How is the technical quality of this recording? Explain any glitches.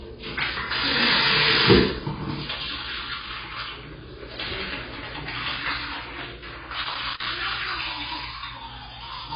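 The technical quality is poor, with constant dullness and two bursts of crackle.

Throughout the clip, nothing is heard above 5 kHz. The top end is simply gone. Heavy codec damage smears the sound and gives it a fizzy, warbling texture. The likely cause is AAC compression, specifically AAC-LC at a very low bitrate, around 16 kbps. At that rate the encoder cannot afford many bits. It drops the high band and quantises the rest coarsely, so detail is lost.

From 3.20 to 3.57 s, and again from 6.65 to 7.35 s, there is loose connector crackle. Each burst is irregular scratching laid over the audio. A worn or dirty contact is making and breaking as it shifts. The signal is chopped in rapid, uneven bursts. Any DC on the line adds sharper clicks at each break. The second burst is nearly twice as long as the first.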